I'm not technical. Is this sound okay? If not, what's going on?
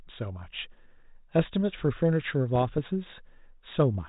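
No. From 2.55 to 2.79 s there are bit errors on an ADPCM link. A few corrupted bits upset the decoder, causing pops and rough bursts in the speech.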